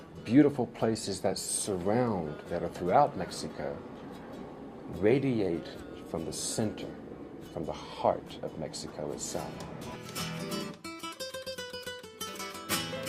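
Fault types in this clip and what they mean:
There are no fault types to list for this clip.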